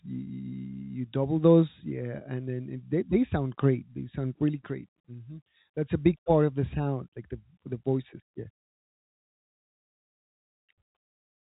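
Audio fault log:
The speech sits in a G.711 mu-law telephone channel at 64 kbps, so its band stops at 4 kHz and only a faint noise riding on its level can be heard from the coding, with nothing else wrong with the signal.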